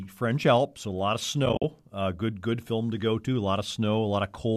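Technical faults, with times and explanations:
1.46 to 1.64 s, AAC frame loss with muting: just after "a lot of", about 100 ms of sound vanishes in short holes scattered over 180 ms, the longest around 50 ms. The overlapping windows fade each hole in and out, unlike a hard dropout.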